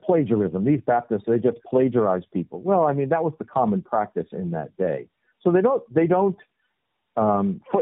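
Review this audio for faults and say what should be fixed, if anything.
Tandem speech coding runs through the whole clip. The speech is rough, muffled and warbly, with nothing above 3.8 kHz. The call seems to have been decoded and re-encoded at each network border. Each coder then squeezed audio that the previous one had already degraded. The sound fits three low-rate speech codecs in a row, such as AMR-NB, then iLBC, then AMR-NB, joined by G.711 links. To prevent this, carry the encoded speech end to end without transcoding, using codec negotiation or transcoder-free operation.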